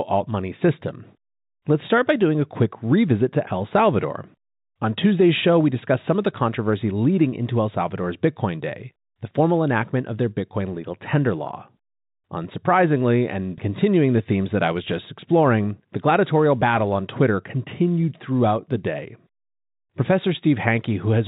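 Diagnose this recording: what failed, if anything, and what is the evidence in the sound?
Nothing in this speech recording points to a failure at any stage. The G.711 telephone coding path is audible as a band limit at 4 kHz, with only a faint quantisation hiss that rises and falls with the level of the speech.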